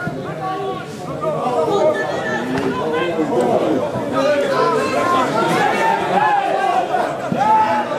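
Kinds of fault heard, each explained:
No kinds of fault are heard in this clip.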